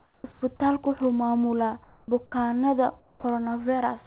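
A speech recording carried over a narrowband call path, with nothing above 4 kHz, which fits G.711 mu-law at 64 kbps. Comfort noise replaces the real background at 0.00 to 0.24, 0.32 to 0.42, 1.84 to 2.08 and 3.00 to 3.24 s. These are steady, featureless hiss patches, quieter by about 7, 3, 2 and 9 dB, that show as flat, smooth bands on a spectrogram. They are likely the result of discontinuous transmission during pauses. Onsets are clipped by the voice detector at 0.21 to 0.24, 2.30 to 2.32 and 3.18 to 3.24 s, cutting 30, 20 and 60 ms. The waveform jumps straight to full amplitude where a gradual rise should be, likely because the detector reacted late.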